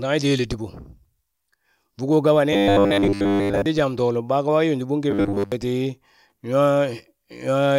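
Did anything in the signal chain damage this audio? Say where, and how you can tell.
Yes. The buffer stage between driver and playback likely ran short of data, so the same short block was replayed instead of waiting for new audio. From 2.53 to 3.66 s and again from 5.11 to 5.52 s, the speech turns into a rigid, metallic 100 Hz buzz, which fits a 10 ms block looping. Most of the real audio in those spans is skipped, and the robotic sound from repeated short buffers only loosely tracks the speech.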